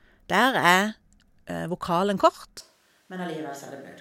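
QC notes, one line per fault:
2.60 to 4.01 s, switch to a distant microphone: the speech abruptly turns roomy and hollow, thinner in the bass and roughly 10 dB quieter, with background noise rising to about 30 dB below the speech, and it stays that way to the end. This is likely a fallback from a failed close microphone to one much further away. On the waveform, amplitude drops in one step. On the spectrogram, low frequencies thin, reverberant tails smear the syllables, and a raised noise floor fills the gaps.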